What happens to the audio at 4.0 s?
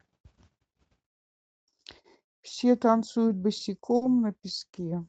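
From 3.96 to 4.03 s there is a short stall from a late packet: the jitter buffer ran dry, so the receiver stretched the last sound by about 50 ms before resuming where it left off. Unlike a dropout, nothing is lost; the sound is held too long with a slight buzz or dip, and everything after it lands 50 ms later.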